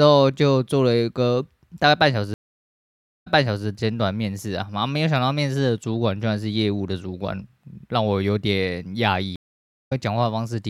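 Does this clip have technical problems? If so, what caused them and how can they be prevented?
Yes, two stream reconnect faults. At 2.34–3.66 s the connection drops, leaving about 0.9 s of silence, and playback resumes 0.42 s earlier, repeating a bit of sound. At 9.36–9.93 s there is a half-second gap, and the audio jumps ahead by roughly 0.3 s. Each time the player lost the stream and restarted its decoder mid-stream. Preventing this means a more stable connection plus a deeper client buffer, so brief dropouts get absorbed before playback runs dry.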